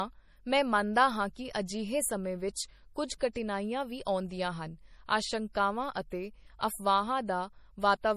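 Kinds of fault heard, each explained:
MP3 compression: Throughout the speech there is a plainly audible watery, swirling quality. Sibilants turn metallic and chirpy, and nothing is heard above about 15 kHz. The likely cause is heavy MP3 encoding at a bitrate that fits roughly 40 kbps. With so few bits, the encoder cuts the treble at a fixed point and drops quieter frequency lines, which then flicker in and out from frame to frame.
pre-echo: Just after "ਹਾਂ ਕਿ ਅਜਿਹੇ ਸਮੇਂ", from 2.54 to 2.56 s, a brief hiss runs ahead of a sharp onset and blurs its start. It lasts about 20 ms. A transform codec spreads its quantisation noise across an entire block. When an attack lands late in that block, the noise scaled for the loud part also fills the quiet moment before it, so the hiss is heard before the sound arrives.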